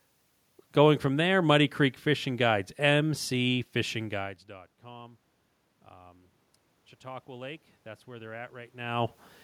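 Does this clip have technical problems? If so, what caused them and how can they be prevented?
Yes. From 7.01 s to 9.17 s there is automatic gain rising: the input level dropped by about 23 dB, and the gain control responded by raising its gain by about 4 dB over roughly two seconds. Because the gain applies to the whole signal, the room noise swells along with the speech. To prevent this, lengthen the AGC's release time or cap its maximum gain.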